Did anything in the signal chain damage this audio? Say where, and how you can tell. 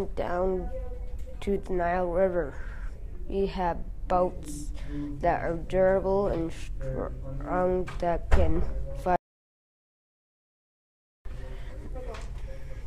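Yes. An audio dropout to silence, most likely from the input being lost upstream of the recorder, from 9.16 to 11.25 s. The sound cuts off abruptly, leaving about 2.1 s of silence with no room tone, then resumes mid-flow; whatever occurred in that gap is gone.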